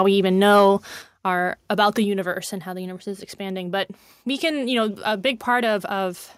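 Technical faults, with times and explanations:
0.56 to 0.67 s, microphone overload: right after "we even" the loudest stretch picks up a harsh, crackly edge. Likely the input gain was set too hot, so peaks ran about 2 dB past the converter's ceiling and a small share of samples got their tops sheared off.
1.02 s and 2.04 s, microphone volume stepped down: the whole level, voice and background together, drops abruptly by about 5 dB just before "our about the universe", then by about 3 dB more between "our about the" and "universe and how the". That's likely the call software reacting to the earlier clipping by cutting the mic's input gain in single steps.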